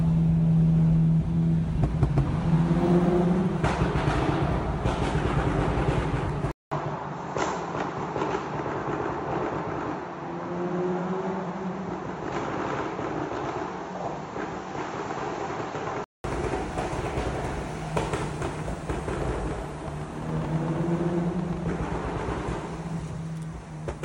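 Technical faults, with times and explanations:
6.52–16.24 s, input switched to a poorer device: after a gap of about 0.2 s the sound turns duller and slightly quieter, with nothing above 7.6 kHz and a new noise floor well below the signal. At 16.24 s the full band returns. The input was likely switched to a narrower-band microphone or headset profile, whose bandwidth limit, gain and self-noise replace those of the original device for that stretch.
19.22–21.58 s, train of clicks: some twenty sharp clicks of similar shape arrive at an uneven pace, averaging 9.34 per second, and peak a few decibels above the surrounding sound. Because they are short broadband pulses, they sit on top of the audio as a ticking rattle and remain audible in quieter moments. The likely cause is electrical interference or a faulty connection or power supply.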